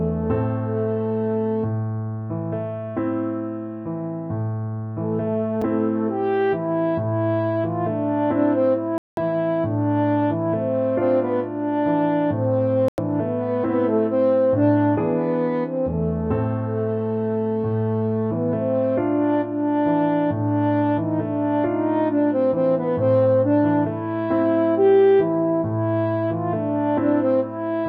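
At 5.62 s a block of digital silence cuts in: roughly 5 ms of sound drops out with no fade, heard as a single tick rather than a hole, most likely because the output buffer wasn't filled in time. Its brevity and lone click distinguish it from the longer gaps that follow. From 8.98 to 9.18 s, then from 12.88 to 12.98 s, a digital broadcast dropout mutes the sound for about 192 ms and then about 96 ms. The lengths fit six and three lost frames, as the receiver stopped playing until valid frames returned. Unlike the buffer gap, these are audible holes where material is gone.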